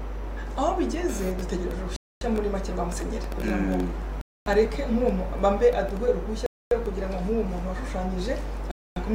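The audio stops dead four times, at 1.96–2.21 s, 4.21–4.46 s, 6.46–6.71 s and 8.71–8.96 s. Each hole is 250 ms of silence with abrupt edges, and the sound resumes where it left off. This is a gap between chunks: the audio was handled in 2.0 s pieces, and silence was inserted at each join, likely from padding or a late start of each chunk, so nothing is lost but playback is repeatedly interrupted.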